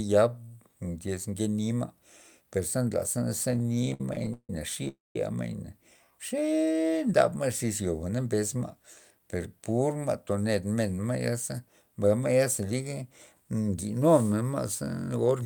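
Repeated stalls (stutter) run from 3.51 to 4.87 s: the speech halts twenty times in close succession, with the longest hold lasting 159 ms. Packets were reaching the receiver late or more slowly than they were being played out, so the jitter buffer kept draining. Each time, the receiver stretched the last sound to bridge the wait, fading it in the longer holds. About 411 ms of filler makes up roughly 30% of that stretch. Nothing is lost, but the speech drags and stutters.

A call audio freeze follows at 4.88 to 5.16 s. The last sound is held for 268 ms and fades out, leaving about 180 ms of silence before the speech resumes exactly where it stopped. The likely cause is packets held up in transit until the jitter buffer ran dry, with the receiver concealing the wait. Because nothing is skipped, the pause adds 268 ms of delay.

A jitter buffer speed-up runs from 8.09 to 9.20 s, where the speech plays at about 107% of normal speed with its pitch unchanged. 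Having built up more audio than it aims to hold, the receiver trimmed many short, pitch-period-sized slices in a row to shed the extra delay, removing about a tenth of a second in total. The result sounds slightly hurried, as if the talker briefly rushed.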